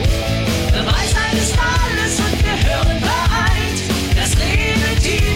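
A loud pop strikes at 2.33–2.36 s and again at 4.51–4.53 s, each a single sharp thump peaking around 10 dB above the audio. Unlike a dropout, the sound carries on underneath. The likely cause is a brief voltage pulse from a plug, switch or static.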